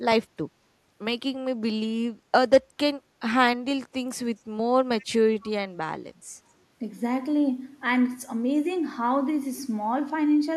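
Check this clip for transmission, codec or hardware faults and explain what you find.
Echo leak appears twice, from 5.00 to 5.05 s and from 5.41 to 5.50 s. A faint copy of the speech returns about 241 ms late, roughly 30 dB and then 25 dB below the original, as brief scraps rather than a sustained echo. The likely cause is a far-end loudspeaker feeding its own microphone, with an echo canceller that failed to remove these fragments, so they were sent back down the line.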